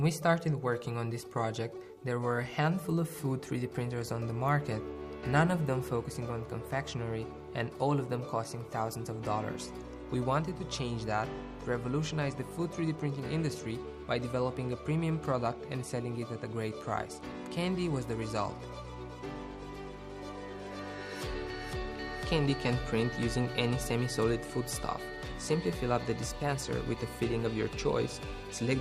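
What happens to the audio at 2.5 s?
Nothing goes wrong at 2.5 s: the audio plays through that moment intact, with no dropout, click, glitch or other fault.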